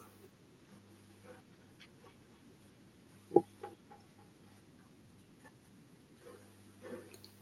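A speech recording carried over a call link, with a feedback echo between two devices from 1.59 s to 5.29 s: each phrase returns at a steady interval of roughly a third of a second, growing thinner and more ringing, peaking at about 14 dB below the direct speech. The discrete, evenly spaced repeats set it apart from room reverberation, which smears into a smooth tail. This points to a second device in the room replaying the signal into a microphone whose echo canceller cannot see it.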